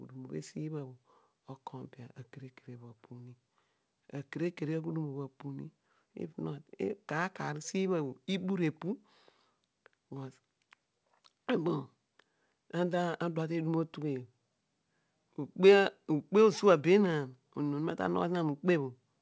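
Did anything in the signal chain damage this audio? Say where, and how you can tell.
No, nothing in the chain stood out as damaging on listening; the speech has the expected 8 kHz top end of a G.722 call path.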